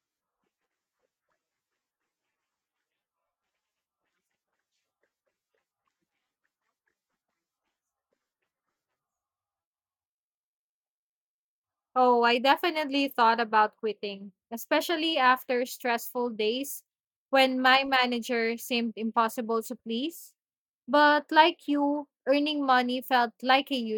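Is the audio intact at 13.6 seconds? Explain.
Yes, the audio is intact at 13.6 seconds, with no fault audible at that moment.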